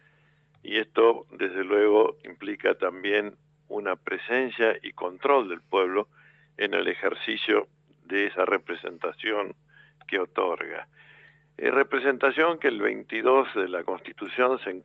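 A speech-tuned noise suppressor stays active across the whole clip, treating sustained tones and tails as noise. The level keeps swinging by a few decibels, so held sound pumps and thins while sharper onsets pass largely intact.

The noise suppressor turns sound down at 0.00–0.64 s, 3.32–3.70 s, 6.05–6.58 s, 7.66–8.09 s, 9.54–10.08 s and 10.86–11.58 s, pulling it down by as much as about 12 dB. Each passage sinks in level before recovering.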